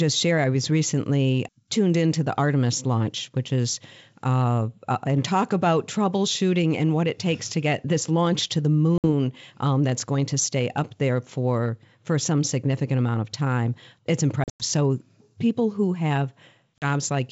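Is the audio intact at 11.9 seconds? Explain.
Yes, the speech is intact at 11.9 s; nothing disrupts it there, and it simply passes through the G.722 wideband telephone coding at 64 kbit/s.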